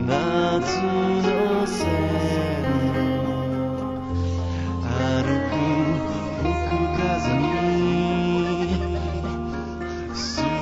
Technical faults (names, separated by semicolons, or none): imaging from linear upsampling